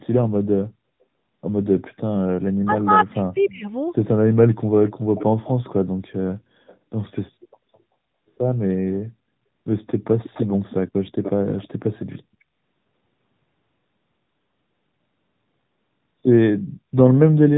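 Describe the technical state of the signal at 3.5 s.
At 3.5 s, speech suppressed in double talk is at work across 2.51 to 3.66 s. The echo canceller likely could not tell the local talker from loudspeaker echo while both sides spoke, so it turned everything down. Speech dips by as much as about 40 dB and drops out in pieces, adding up to roughly a second.

Overlapping this, an echo leak runs from 3.35 to 3.53 s. One side's echo canceller likely failed to remove all of its loudspeaker pickup and sent some back. A faint copy of the speech returns about 0.3 s late, roughly 30 dB below the direct sound.

The whole clip, including this moment, passes through the AMR narrowband mobile codec. It drives a vocal tract model with sparse pulses, and the coding damage points to a mid-rate mode around 10 kbps. Nothing above 3.8 kHz survives, so the speech sounds muffled and plainly buzzy.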